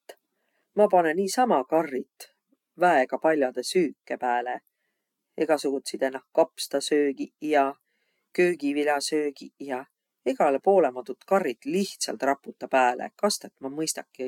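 No technical faults can be heard anywhere in the speech. There is nothing in the audio that calls for a timed note.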